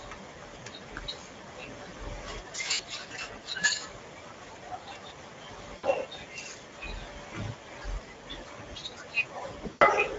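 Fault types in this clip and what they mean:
Speex codec: Speech runs through the Speex CELP codec at about 16.8 kbps throughout, so it sounds plainly hoarse and noisy, with thin excitation.
VoIP packet loss concealed by the speech codec: Lost packets are filled by extrapolating the last pitch and filter. The gaps near 0.33, 2.73, 5.77 and 9.69 s are stretched into a buzzy tone or coloured noise that fades.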